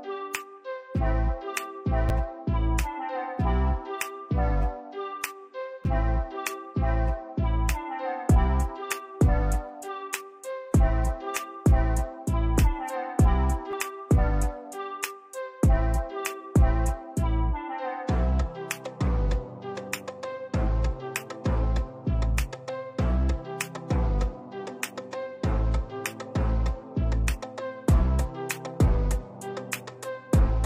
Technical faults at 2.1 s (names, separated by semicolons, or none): repeated buffer